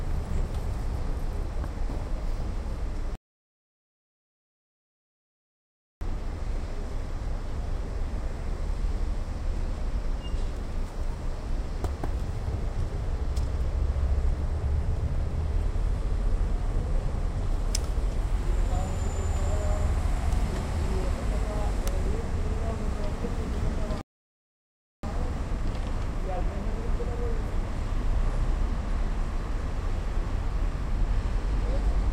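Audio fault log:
3.15–6.01 s and 24.01–25.03 s, rebuffering stall: playback runs dry and falls silent for about 2.9 s, then about 1.0 s, each time picking up exactly where it halted. Unlike a dropout, no material is skipped; the player waits for data, adding time.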